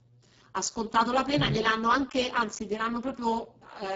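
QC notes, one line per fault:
Throughout: Speex codec. The speech has been squeezed to a very low bitrate, about what a 6 kbps Speex mode gives, and the damage is heavy. This CELP coder has too few bits to model the excitation, so the voice comes out hoarse, noisy and edging toward robotic. Nothing survives above about 7.7 kHz. The upper band that remains is a shaped noise fill rather than real detail, which adds a hissy, grainy top.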